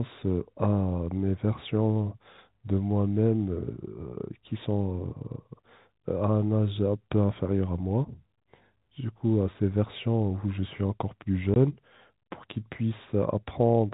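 A packet was lost at 11.54 to 11.56 s in this speech, and the receiver played silence in its place, a case of packet loss filled with silence. The 20 ms gap, which fits a single lost packet, cuts sharply in and out, leaving a brief hole over the narrowband G.711 telephone sound.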